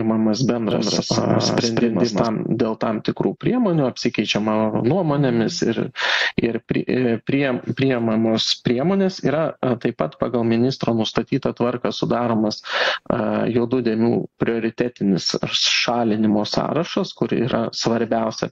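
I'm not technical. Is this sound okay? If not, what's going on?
No. From 0.71 to 2.27 seconds there is a doubled audio track, likely from a second, slower copy being mixed in, so everything repeats about a fifth of a second later, just as loud.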